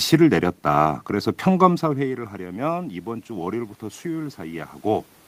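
Speech, with one fault: automatic gain rising from 1.84 s to 5.14 s. Just after the talker moves away from the microphone at around one and a half seconds, the level at the input falls by about 15 dB. The automatic gain control responds by slowly raising its gain by about 5 dB over those three seconds, so the voice and the room noise swell up together rather than the voice alone recovering.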